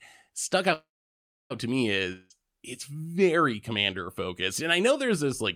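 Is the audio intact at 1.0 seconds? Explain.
No. A call audio freeze runs from 0.73 to 1.52 s, likely from delayed packets draining the jitter buffer. The last sound is stretched briefly, then about 0.65 s of silence follows before the audio resumes at "to me", late but with nothing lost.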